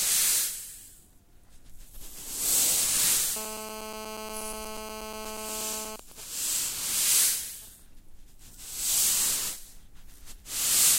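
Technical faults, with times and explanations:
3.36–5.96 s, GSM phone buzz: a hard, raspy buzz about 9 dB below the sound, pulsing at 217 Hz with a dense stack of harmonics. A nearby 2G phone in a call transmits steady radio bursts that the audio circuit rectifies. Unlike smooth mains hum, it is gritty and continuous.
5.99–7.80 s, GSM signalling bursts: the steady buzz gives way to a much fainter pattern of even ticks with a longer 217 Hz buzz twice a second. The phone is still in the call, but its user has gone silent, so it sends only sparse groups of bursts. The broken rhythm separates this from the continuous call buzz.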